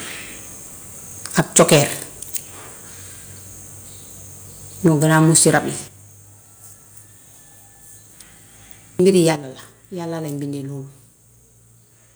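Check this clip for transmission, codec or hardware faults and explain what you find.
Two microphone faults recur in this speech: clipping on loud passages, and sudden drops in level that follow them.

Microphone overload, at 1.38–1.79 s, 4.85–5.57 s and 9.07–9.19 s: harsh, crackling edges on the loudest syllables. The likely cause is input volume set too high, so peaks hit the converter's ceiling and their tops are sliced off. The first burst is worst, about 14 dB over with roughly a tenth of samples flattened. The second is about 10 dB over, and the third is about 2 dB over.

Microphone volume stepped down, at 1.4 s (about 2 dB), 4.88 s (about 2 dB), 5.88 s (about 6 dB) and 9.36 s (about 7 dB): voice and background abruptly get quieter. This is likely the call software reacting to the clipping by cutting the device's input volume in one step.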